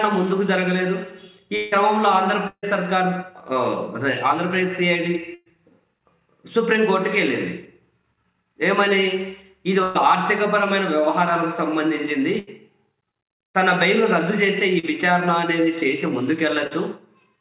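At 1.56 to 1.75 s the sound stretches into a fading buzz or hiss for about 160 ms. This is likely a long network dropout, with audio that never arrived replaced by continuation.

Bursts of packet loss follow at 2.48 to 2.66 s, 5.35 to 5.56 s, 9.83 to 9.98 s and 12.39 to 12.50 s. Each is a buzzy or hissy smear of roughly 80 to 160 ms that decays, briefly into silence at 2.5 s. The receiver extended the last sound over runs of lost packets and skipped ahead.

At 14.79 and 16.67 s there are short wobbling smears of about 40 ms each. These are short concealed packet losses, patched from the preceding sound before blending back.

Throughout, the band stops at 4 kHz, which fits a 64 kbps G.711 mu-law call path.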